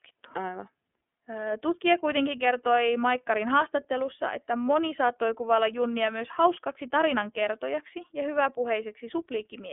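iLBC codec damage runs through the whole clip. The speech is confined to a telephone band of 250 Hz to 3.4 kHz, with nothing above 3.6 kHz. Each frame is coded on its own, leaving a plainly rough, synthetic grain that points to 30 ms frames at 13.33 kbps.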